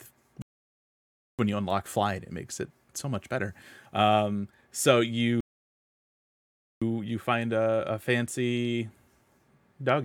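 At 0.42 s the speech drops to silence and picks up again at 1.39 s, then does the same from 5.41 s to 6.82 s. Both are rebuffering stalls: playback exhausted its downloaded audio and waited for more. It resumes exactly where it stopped, adding about 0.97 s and 1.41 s without losing anything.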